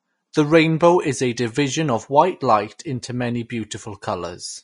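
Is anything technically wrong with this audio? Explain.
Yes. Throughout the speech there is a plainly audible hiss and graininess, with roughened tonal sounds, smeared onsets, and nothing at all above 10.5 kHz. This is likely Vorbis compression at low quality. The encoder has lowered its cut-off to 10.5 kHz, and the treble it keeps is quantised so coarsely that fine detail turns into noise of similar energy. The damage points to a low bitrate of around 34 kbps.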